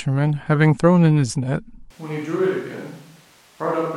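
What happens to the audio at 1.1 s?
Nothing goes wrong at 1.1 s; the speech there plays through intact, with no dropout, click or distortion.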